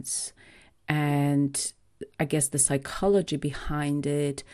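MP2 compression runs through the whole speech clip: the sound is dull and carries a gurgling, granular edge. This likely comes from MPEG Layer II coding at around 80 kbps, where too few bits shut off upper sub-bands and leave the remaining ones coarsely quantised.

DAB burbling appears from 1.01 to 1.13 s over the speech. A small scattering of bit errors, around 0.03%, slipped past error correction and corrupted the audio data, putting short blips of noise into single sub-bands across about three frames.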